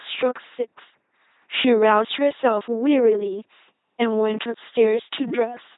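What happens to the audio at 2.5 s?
The speech at 2.5 s, like the whole clip, has passed through an LPC-10 vocoder at 2.4 kbit/s. It rebuilds each moment from a simple filter excited by either a pulse buzz or noise. The result is a heavily damaged, buzzing, robotic voice with nothing above 3.8 kHz.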